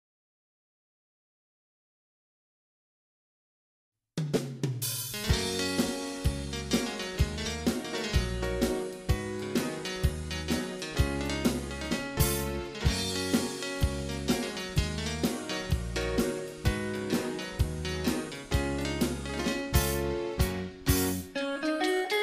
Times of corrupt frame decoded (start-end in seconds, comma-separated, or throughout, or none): 4.34-4.41, 7.40-7.47